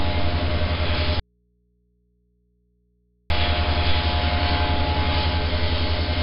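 4-bit ADPCM compression, throughout: coarse 4-bit prediction steps leave gritty hiss riding every loud sound, with nothing above 5.3 kHz, which fits a low-rate encode near 44 kbps.

Audio dropout to a faint residue, 1.20 to 3.30 s: the sound cuts abruptly for 2.1 s, leaving only hum about 45 dB down, likely from the signal dropping while the input stayed live.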